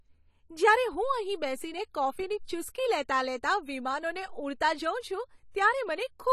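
Speech, and the whole thing carries AAC compression damage that's plainly audible: the top end stops dead at 14.1 kHz, and sibilants come out smeared and fizzy. That's likely low-bitrate AAC-LC, which fits something around 32 kbps starving the high bands.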